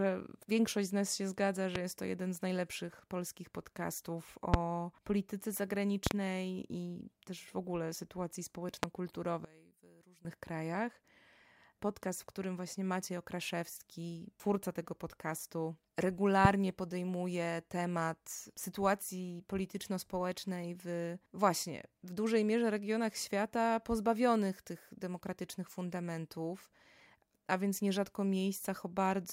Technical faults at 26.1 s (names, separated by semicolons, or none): none